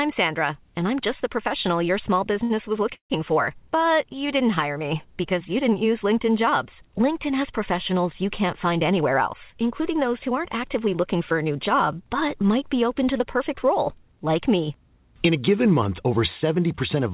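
At 2.44 s to 2.52 s there is a short stall from a late packet. A packet arrived after its playout time, the jitter buffer ran dry, and the receiver stretched the last fragment of speech to cover the wait, inserting about 64 ms before resuming at the same point. Nothing is lost, but that sound is held audibly too long, with a faint buzzy, slightly dipped quality.

A longer interruption follows at 2.94 s to 3.12 s, most likely a call audio freeze caused by packets held up in transit until the buffer emptied. About 160 ms is added in total. The final sound is drawn out into a fading buzz, then roughly 100 ms of the gap is silent before speech resumes exactly where it stopped. The content is intact, but the delay has grown by the full 160 ms.

From 8.56 s to 11.16 s there is a jitter buffer speed-up. The buffer was holding more audio than its target, so the receiver cut many short pitch-period-length slices, around 150 ms in all. 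Speech in this stretch plays at about 105% speed with unchanged pitch and sounds slightly hurried. Throughout, the audio carries the band-limited character of the G.711 mu-law call path, with nothing above 4 kHz.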